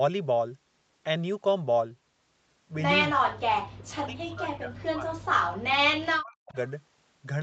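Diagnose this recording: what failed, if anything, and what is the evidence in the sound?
Speech drops sharply from 3.64 to 5.31 s and again from 5.89 to 6.56 s, by roughly 40 dB. The stage is call processing. The likely cause is speech suppressed in double talk: the echo canceller mistook this talker for far-end echo and attenuated it.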